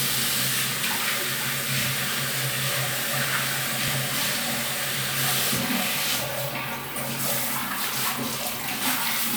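At 3.88 s the sound jumps forward, as if a sliver of roughly ten milliseconds were snipped out. A larger jump follows at 7.19 s, losing about thirty milliseconds, and another small skip comes at 8.16 s. None of these leaves a gap of silence. The likely cause is a dropped buffer (overrun): the recording software fell behind, the hardware overwrote the waiting samples, and the audio on either side was spliced together.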